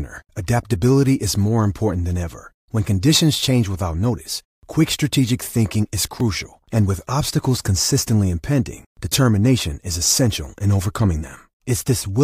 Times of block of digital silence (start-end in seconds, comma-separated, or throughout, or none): 6.20